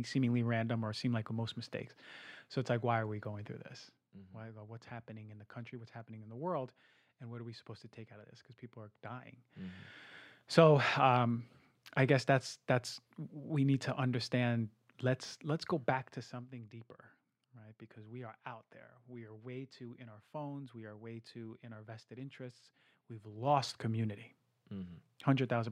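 From 15.72 to 16.56 s, zipper noise rides on the speech as the level drops about 15 dB. The gain moves in unsmoothed steps, roughly 40 a second, each clicking. It returns from 23.17 to 23.66 s as the level climbs back.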